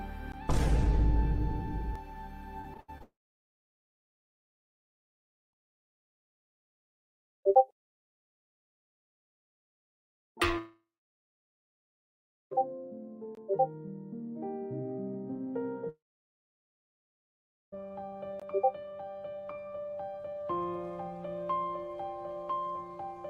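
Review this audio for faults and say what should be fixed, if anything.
Choppy, robotic repeated packet loss from 2.61 to 3.02 s: five short holes, the longest 79 ms, each patched by stretching the preceding sound.

Long network dropouts at 3.02–5.55 s, 10.58–12.53 s and 15.89–17.82 s: a brief fading buzz, then silence, likely from packets never arriving, so audio resumes with material missing.

A more stable connection with a larger jitter buffer and forward error correction would help prevent both.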